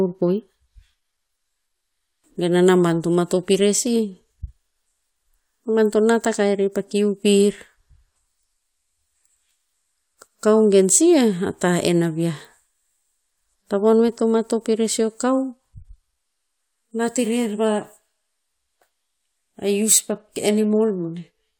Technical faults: none

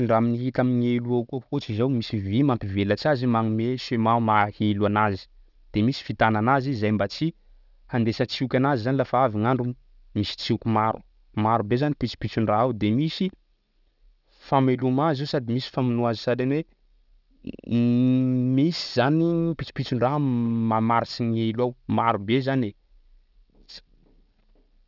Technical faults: aliasing

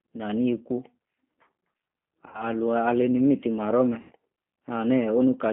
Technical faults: G.729 codec; VoIP packet loss concealed by the speech codec

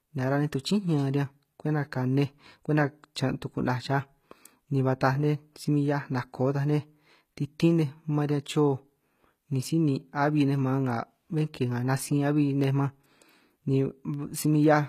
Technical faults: HE-AAC compression; pre-echo; periodic USB or driver dropouts

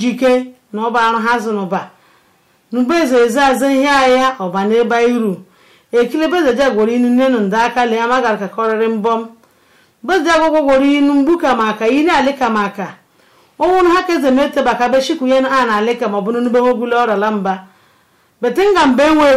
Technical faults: hard clipping

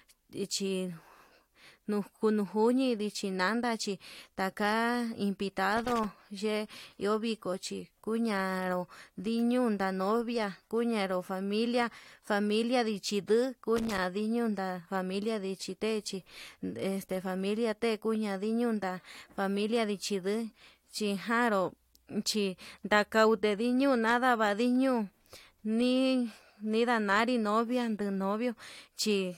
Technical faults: loose connector crackle

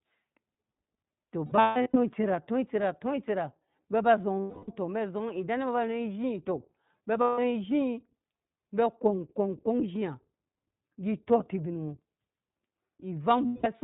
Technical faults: iLBC codec; lost iLBC frames

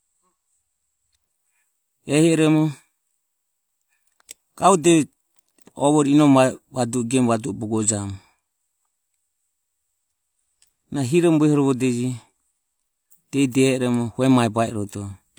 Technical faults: none

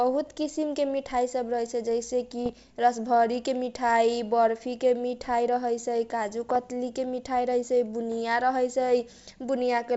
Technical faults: bit errors on an ADPCM link

